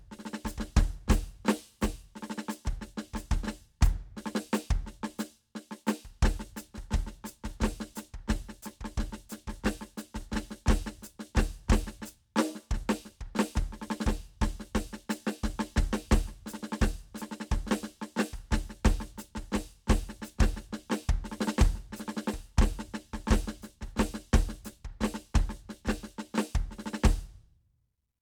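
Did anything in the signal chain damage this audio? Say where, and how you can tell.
No, nothing in this music stood out on listening as damage from any stage of the signal chain.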